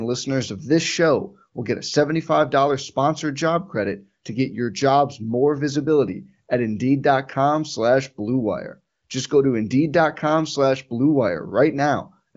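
No audible technical faults.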